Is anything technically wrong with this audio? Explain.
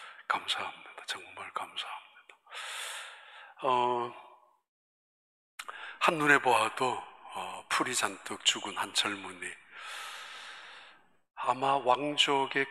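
No, nothing technically wrong stood out on listening to this audio.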